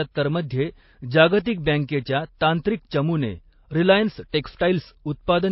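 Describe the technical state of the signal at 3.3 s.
At 3.3 s the speech sounds dull and smeared, with nothing above 5.6 kHz, and a watery, swirling texture overlaid with a second, different graininess. This runs through the whole clip, not just that moment. The likely cause is transcoding between lossy codecs. A low-rate MP3 stage, which fits roughly 24 kbit/s, removed the top band and left its artefacts. A later WMA 1 encode near 96 kbit/s then spent its bits on that damage while adding its own.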